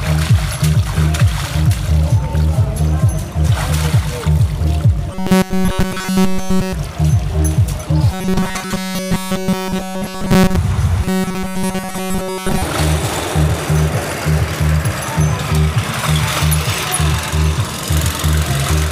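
Robotic sound from repeated short buffers appears at 5.12 to 6.73 s, 8.12 to 10.56 s and 11.04 to 12.62 s. Each stretch becomes a rigid, metallic buzz fixed at 188 Hz, with essentially none of the real audio getting through. The likely cause is new audio arriving too seldom, so playback loops one short slice of about 5.3 ms. That loop length sets the imposed pitch, which stays constant while the sound's outline is only roughly followed.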